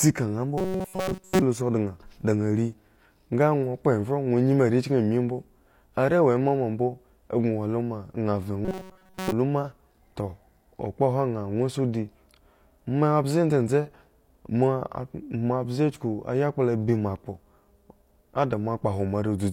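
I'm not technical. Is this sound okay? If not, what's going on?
No. Audio likely arrived too seldom, so tiny scraps were replayed in place of the real sound. This robotic sound from repeated short buffers gives a rigid 188 Hz buzz at 0.58–1.42 s and 8.65–9.32 s.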